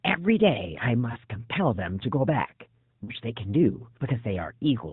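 Narrowband mobile speech has lost AMR speech frames at 1.12 to 1.19 s and 3.04 to 3.12 s. Each 40 ms gap, likely two corrupted 20 ms frames, is concealed by a brief smeared, fading warble.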